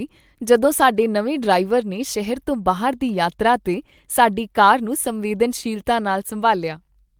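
Nothing in this speech recording points to a technical fault in the signal.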